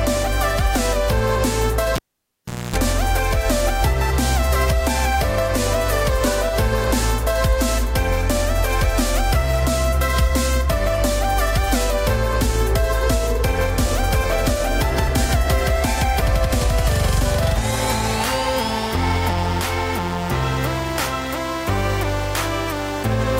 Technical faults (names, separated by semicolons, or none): cable pulled and plugged in